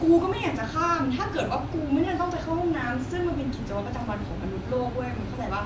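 Nothing in the speech stood out as a technical problem on listening.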